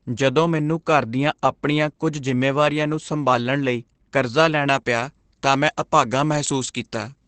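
From the start, the speech carries Opus voice compression, coded coarsely with the SILK speech coder in wideband mode, pointing to a bitrate around 12 kb/s. Nothing survives above 8.4 kHz, so the voice sounds muffled, slightly hoarse and a little robotic throughout.

At 4.69 s, right after "ਨੂੰ ਸੰਭਾਲਣ ਲਈ ਕਰਜ਼ਾ", pre-emphasis is left on: a treble boost matching the 75 µs FM curve goes uncorrected through to the end. The top is about 13 dB too strong at 10 kHz against 1 kHz, making the sound thin, bright and sibilant.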